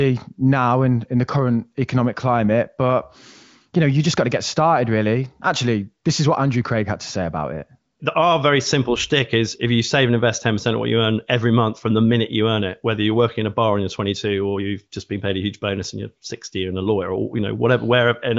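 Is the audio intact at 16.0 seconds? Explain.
Yes, the speech at 16.0 seconds is intact, carried cleanly through the AMR wideband (HD Voice) codec at 23.05 kbit/s with its usual top end stopping near 7.6 kHz.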